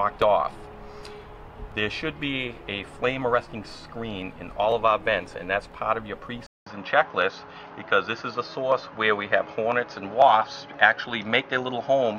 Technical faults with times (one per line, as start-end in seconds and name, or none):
6.46-12.19 input switched to a poorer device